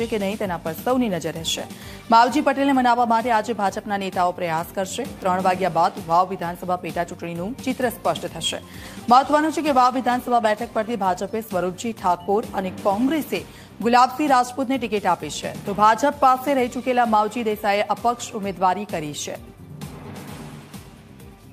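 From 8.78 to 13.39 s the sound turns rough and muffled: a call bitrate drop, consistent with the encoder falling from 64 to 23 kbps.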